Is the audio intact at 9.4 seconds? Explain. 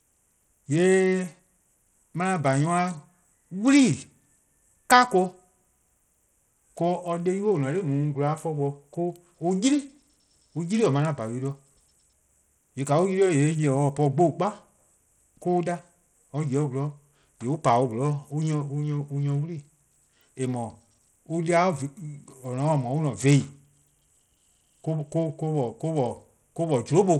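No. At 9.4 seconds, as throughout the clip, the speech shows what is likely Bluetooth SBC compression, at a low bit pool that fits roughly 80 kbps. With so few bits, the encoder starves its upper sub-bands and coarsely quantises the rest. The damage is plainly audible: the treble thins and flickers in and out, and a gritty, grainy noise with aliasing rides on the speech.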